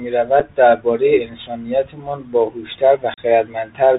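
Throughout, the speech passes through the Bluetooth CVSD headset codec, whose one-bit slope tracking leaves grainy hiss and scratchy s sounds; the spectrogram stops sharply at 4 kHz.

Unconcealed Bluetooth headset packet loss blanks the sound for 7.5 ms at 0.40 s and for 37.5 ms from 3.14 to 3.19 s. These show as flat, abruptly edged waveform gaps.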